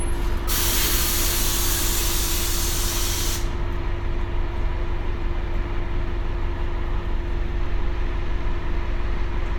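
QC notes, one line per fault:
Nothing to flag here; the sound comes across fine all the way, with no problems worth noting.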